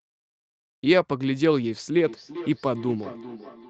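From 2.07 s, speech repeats roughly every 0.4 s, about 17 dB down: feedback echo between two devices, one replaying the other's microphone.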